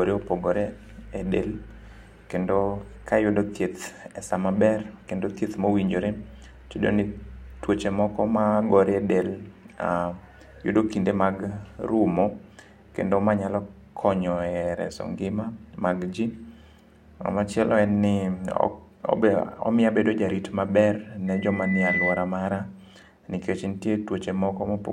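A speech recording with loudspeaker feedback squeal from 21.27 to 22.39 s: a 2 kHz tone swells over under a second to roughly the speech's level as the microphone–speaker loop exceeds unity gain. The build-up marks feedback rather than a steady electrical whine.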